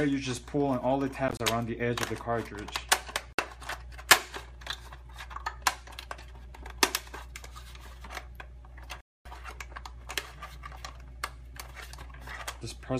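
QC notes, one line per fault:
1.28–1.40 s: Bluetooth dropout. Several brief holes cut the sound, about 58 ms missing in total across 116 ms. The longest gap is 29 ms. The likely cause is audio packets reaching the headphones too late and being discarded.
3.33–3.39 s: Bluetooth dropout. One gap of about 58 ms.
9.01–9.26 s: Bluetooth dropout. A longer silence of about 247 ms. Each time, the sound returns further along, as if it had kept playing.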